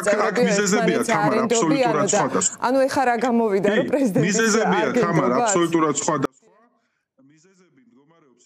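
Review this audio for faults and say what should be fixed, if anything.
At 6.25 s the sound cuts abruptly to a faint residue, roughly 35 dB below the signal, and stays there to the end: an audio dropout to a faint residue, likely a lost feed with the path still live. The waveform collapses to a thin band; the spectrogram goes nearly blank. Monitoring the source connection and input level during capture would catch this.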